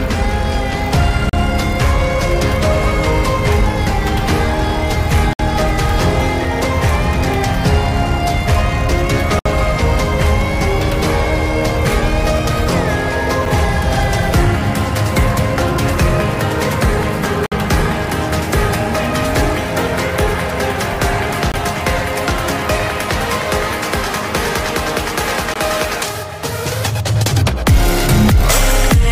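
A gap between stream segments recurs every 4 s: hard-edged silences at 1.29–1.33, 5.33–5.39, 9.39–9.46, 13.46, 17.46–17.52, 21.52–21.54 and 25.54 s, lasting 7 to 63 ms. Segment timestamps leave small holes that the player fills with silence. No audio is lost.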